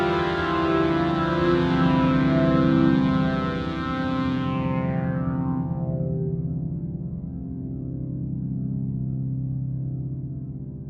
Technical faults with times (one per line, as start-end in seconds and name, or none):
none